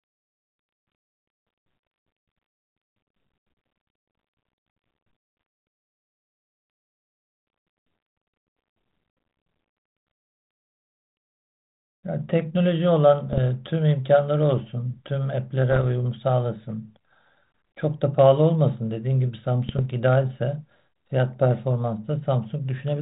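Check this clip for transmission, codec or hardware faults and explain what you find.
Three short bursts of bit errors on an ADPCM link corrupt the speech, at 13.28–13.39 s, 15.70–15.86 s and 19.68–19.81 s. Flipped bits throw off the decoder's step size and predictor, producing pops and rough, level-jumping bursts on audio whose 4 kHz band limit fits 32 kbit/s G.726.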